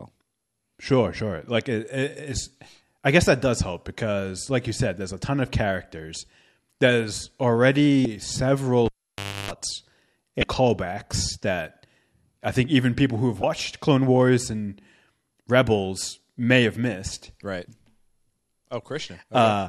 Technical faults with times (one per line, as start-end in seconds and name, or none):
8.02-8.05 damaged data in a compressed stream
8.86-9.51 cable pulled and plugged in
10.40-10.43 damaged data in a compressed stream
13.40-13.44 damaged data in a compressed stream